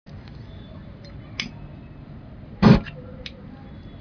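No technical faults are audible.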